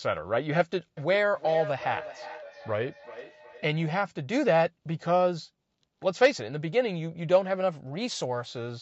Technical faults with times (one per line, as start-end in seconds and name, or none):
0.97-4.02 feedback echo between two devices
7.60-8.46 drift correction step